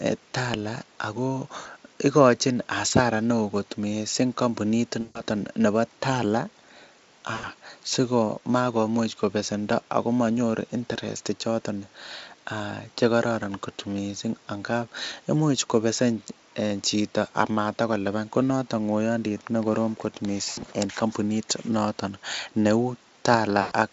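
Speech with VoIP packet loss concealed by the speech codec, heard at 1.59 s (before "ikochin hasara neoo kot"), 5.01 s (after "neoo kot missing kampunit", about 140 ms), 7.35 s, 20.49 s (between "nekorom kot" and "en kampunit") and 23.61 s. Each gap of 60 to 140 ms of lost audio becomes a fading extension, a buzzy tone or coloured noise. On a spectrogram, the last harmonics smear flat and decay. On the waveform, a repeating, shrinking envelope appears.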